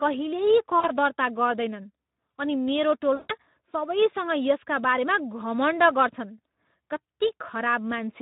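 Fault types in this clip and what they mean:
Speex codec: The whole clip carries the hoarse, grainy texture of a low-rate CELP coder. The speech has too few bits for its excitation, so voiced sounds come out noisy and rough, and the damage is plainly audible throughout. The level of coarseness fits a setting around 11 kbps. Unlike a transform codec's swirly, underwater artefacts, the fault here sits in the voice source itself, which sounds buzzy and breathy rather than smeared in time.
VoIP packet loss concealed by the speech codec: At 0.79 to 0.91 s and again at 3.15 to 3.32 s, the decoder bridges missing audio by stretching its last pitch and spectral shape into a sound that fades. The first gap is about 40 ms, which suggests two 20 ms frames. The second runs about 140 ms. Unlike a plain dropout, the gap is filled with a synthetic smear that recovers slowly afterwards.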